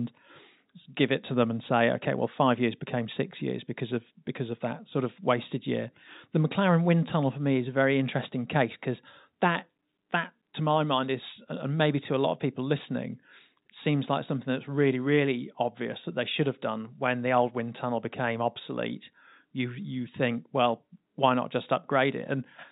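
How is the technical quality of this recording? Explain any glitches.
No glitches can be heard in the speech. It has the narrow, telephone-like sound of G.711 telephone coding, with nothing above about 4 kHz and a faint hiss that rises and falls with the speech level, which fits a 64 kbps mu-law line.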